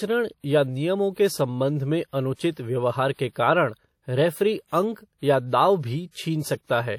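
Throughout the speech, a washy, ringing quality is audible, with a hiss that swells and fades with the voice. This is likely WMA compression at a low bitrate, around 48 kbps. Long transform blocks smear the coding noise over time. Nothing is heard above 18.7 kHz.

At 2.34 s, after "नियमों के संबंध में" and before "व्यव्हार के कारण रेफ़री", there is pre-echo. A brief hiss runs for 55 ms before a sharp onset. At 6.11 s, after "या दाव", it recurs over 43 ms. Noise meant for the loud attack leaks into the quiet moment before it, softening the onset.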